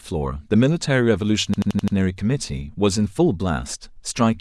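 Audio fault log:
1.54–1.96 s system hang loop: the system stalled while the hardware kept replaying a buffer that fits 2048 samples, so one 85.33 ms slice of speech repeats five times, a machine-gun stutter at 11.7 Hz.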